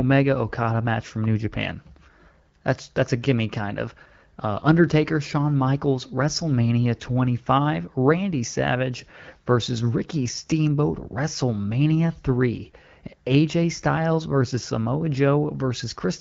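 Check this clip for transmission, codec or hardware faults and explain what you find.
Nothing faulty found in this speech: the band reaching to about 7 kHz, with the top slice above 6.4 kHz noise-filled, fits AMR-WB (HD Voice) at a rate of about 12.65 kbit/s, running as designed.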